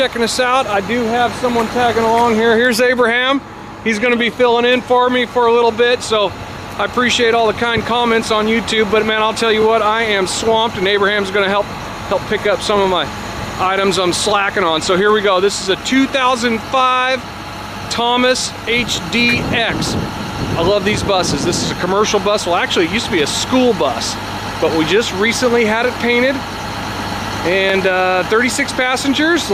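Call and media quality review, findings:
Overlapping chunks at 3.60, 9.62, 15.65, 21.67 and 27.70 s: a brief stutter or click at each, one join roughly every 6 s. Each new 6.0 s block starts about 25 ms before the previous block ended, so that slice of audio plays twice at the seam. Probable component: a chunked processing or transport stage with misaligned block boundaries, overlapping rather than abutting consecutive segments.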